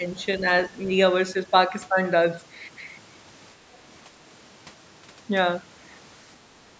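Speech suppressed in double talk at 0.00 to 0.05, 0.39 to 0.45, 0.69 to 0.87 and 6.68 to 6.72 s: the speech briefly dips by roughly 5 to 10 dB, likely because an echo canceller could not separate this side's talk from the simultaneous far-end echo and attenuated both, on audio band-limited to 8 kHz by call processing.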